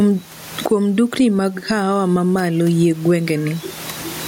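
Gain pumping runs through the whole speech clip, a level swing of around 20 dB. The likely cause is input gain set far too high, with a fast limiter or compressor clamping down on each peak, leaving the speech squashed and flat in dynamics. A noise gate would instead cut the pauses toward silence; here the room noise sits about 34 dB below the speech.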